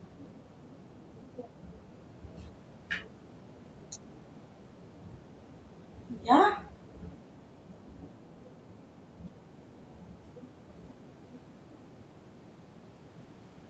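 No technical faults are audible.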